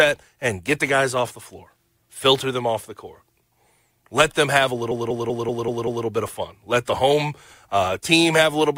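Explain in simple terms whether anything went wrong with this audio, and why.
Just after "them have a", from 4.91 to 6.06 s, the speech stutters: the same short snippet, about 192 ms long, plays six extra times before "bit of fun" carries on. This is repeated frames: a chunk of the compressed audio was sent or saved more than once, adding about 1.15 s.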